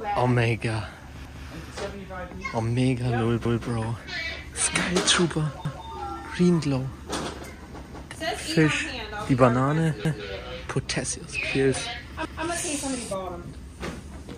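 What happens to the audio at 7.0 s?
Nothing goes wrong at 7.0 s; the audio plays through that moment intact, with no dropout, click, distortion or other fault.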